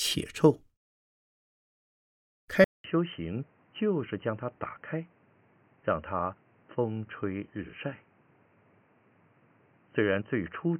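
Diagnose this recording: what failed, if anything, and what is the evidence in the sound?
At 2.64 s the speech goes silent for 200 ms, then returns dull and boxy. Nothing remains above 3.1 kHz. Level drops about 5 dB, over a new, fairly quiet noise floor. Likely cause: the driver stage switched input to a poorer device.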